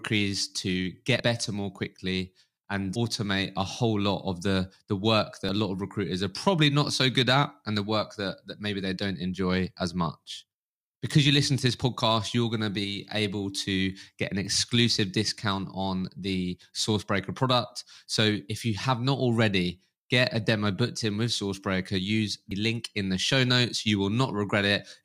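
Brief glitches at 1.20 s (before "better more quickly and"), 5.49 s (between "of the the work" and "lot of recruiters are") and 22.51 s (before "link in the show"): damaged data in a compressed stream, where the decoder misreads corrupted frames and loses sync.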